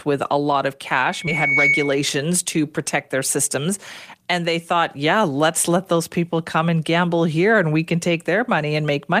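Loudspeaker feedback squeal runs from 1.04 to 2.14 s, between "with a lot of" and "to protect their". The microphone's loop gain exceeds one at 2.2 kHz, so a pure tone swells over about a second to about 5 dB above the speech.

A skip ahead at 1.27 s drops about 300 ms of audio, and playback jumps straight to later material with no gap or fill.

A jitter buffer speed-up runs from 4.14 to 4.96 s, just before "yeah let's let those". The receiver trims around 70 ms of pitch periods, so the speech runs 7% faster at the same pitch and sounds hurried.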